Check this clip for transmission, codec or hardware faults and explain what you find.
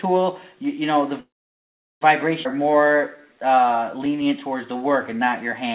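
Three transmission faults occur, all in how packets reached the receiver. The sharp cut-off at 4 kHz fits a narrowband telephone codec such as G.711.

From 1.2 to 2.03 s there is a call audio freeze. Packets were likely held up in transit, so the jitter buffer ran dry. The receiver briefly stretched the last sound and then, for about 760 ms, played near-silence. When the packets arrived, playback resumed exactly where it had stopped. Nothing is lost, but an 0.8 s hole interrupts the flow.

From 2.43 to 2.47 s comes a skip ahead. After the freeze, about 0.4 s of audio was dropped while later audio was already waiting. Playback lurches forward with only a tiny gap, and the sound on either side of the missing stretch is butted almost directly together, so the continuity breaks abruptly.

From 2.53 to 5.30 s a jitter buffer slow-down follows. The buffer rebuilt its reserve by repeating single pitch periods and short pauses many times over. 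This added 271 ms, so playback runs at about 90% speed with unchanged pitch. Sounds are drawn out and slightly sluggish.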